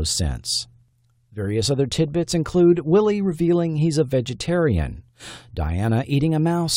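No technical faults are audible.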